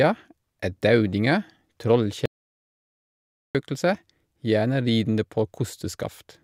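Speech recording with an audio dropout to silence from 2.26 s to 3.55 s: the sound cuts off abruptly mid-flow and returns just as abruptly after 1.29 s, and whatever was said in that stretch is simply missing. The cause is likely a brief loss of the input signal while recording carried on writing zeros. Unlike a natural pause or a gated gap, no room tone or hiss survives underneath; the gap is dead digital silence.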